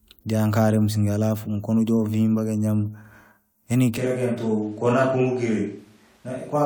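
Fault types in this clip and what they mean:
Switch to a distant microphone: from 3.98 s to the end the speech turns abruptly roomy and hollow, thinner in the bass, roughly 5 dB quieter, with faint room noise, likely because the close microphone dropped out; unlike added reverb, everything changes in one step.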